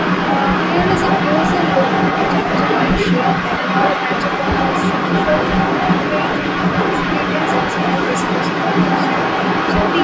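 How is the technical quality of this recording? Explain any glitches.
The main problem is an echo leak that runs the full clip, from 0.0 to 10.03 s. A second copy of the speech trails the original by 310 ms, about 5 dB louder, so the repeat competes with the direct sound. The likely cause is a loudspeaker at the other end whose echo canceller passed its microphone pickup back into the call. The top end stops at 8 kHz, consistent with call microphone processing.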